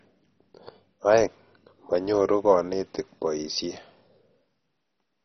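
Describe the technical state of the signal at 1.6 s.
At 1.6 s the speech has likely been through MP2 compression at a very low rate, consistent with about 32 kbps. The encoder cannot give bits to all of its 32 sub-bands, so it has switched off everything above 6.1 kHz and quantises the remaining bands coarsely. The damage is heavy and runs through the whole clip: the sound is dull and muffled, with a gurgling, granular roughness as bands flicker in and out.

This moment also falls inside a run of clock drift buffer slips lasting from 0.64 s to 4.58 s. Two devices most likely run on clocks roughly 150 ppm apart, so the buffer between them drifts until a handful of samples, around seven, is dropped or repeated. That happens every 1.31 s, about four times in this span. Each slip is a regularly spaced click while the speech is present.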